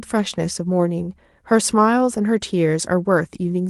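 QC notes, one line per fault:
No faults heard in this speech clip.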